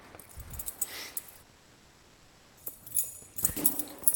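At 1.29 s and again from 1.36 to 1.39 s, short concealed packet loss occurs. About 10 ms, then 20 ms, of audio arrived too late. The receiver patched each gap by extending the preceding sound. Each is heard as a brief smear or wobble.

From 1.42 to 2.58 s, the real sound stops for about 1.15 s. A synthetic continuation of the last sound fills the whole gap, with no silence. The real audio then resumes further on. This is likely a long network dropout.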